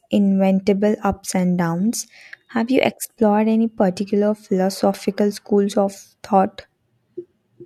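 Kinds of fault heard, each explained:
No audible faults detected.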